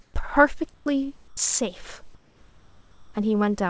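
Speech, where the background in the pauses at 0.02–0.14 s, 0.74–0.86 s and 1.28–1.37 s is swapped for comfort noise, likely from discontinuous transmission. It is steadier and about 1, 9 and 4 dB quieter, showing as smooth, featureless patches on the spectrogram.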